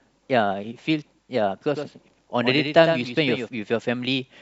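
From 1.75 s to 3.49 s the speech carries a doubled audio track: a second, full-band copy trails the original by roughly 100 ms at about 5 dB lower, heard as a flat, slap-like echo with no room tail that switches on and off abruptly. The likely cause is a slower second capture path mixed back in. A spectrogram shows every syllable repeated as a fainter, time-shifted ghost; the waveform shows offset, overlapping envelopes.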